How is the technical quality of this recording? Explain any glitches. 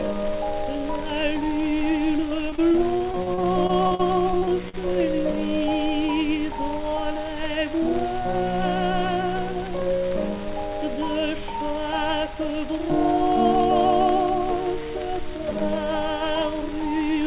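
The recording has one clear glitch: a burst of repeated packet loss. The audio also carries nothing above 4 kHz, consistent with a narrowband call path such as G.711.

From 2.5 to 4.75 s there are fifteen short holes, the longest about 44 ms. Each is concealed by extending the preceding sound, covering roughly 16% of the stretch. The result is choppy audio with pieces missing. A spectrogram shows smeared, repeated frames with vertical seams, and the waveform shows copied cycles.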